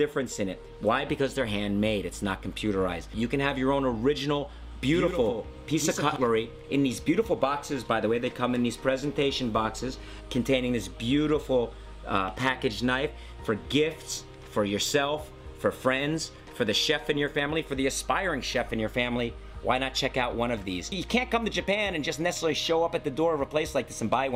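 From 4.62 to 6.16 s there's a doubled audio track: a second full-band copy sits about a tenth of a second behind, a few dB down, with no decay or room tone. It cuts in and out abruptly, likely a slower second capture path mixed in.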